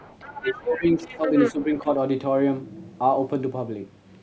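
From 0.0 to 0.61 s, the echo canceller likely left part of the loudspeaker signal in the microphone feed. This other side's voice leaking through sits faintly under the speech, roughly 15 dB below it.

From 0.4 to 1.29 s, with both sides talking, the canceller likely could not separate its own talker from the echo and turned everything down. This speech suppressed in double talk makes the talker dip by up to about 15 dB for most of that stretch.

From 1.02 to 1.52 s the leak returns much stronger, only about 5 dB below the speech, so the second voice is clearly audible.

From 1.52 to 1.88 s a shorter suppression follows, briefly pulling the talker down by about 10 dB.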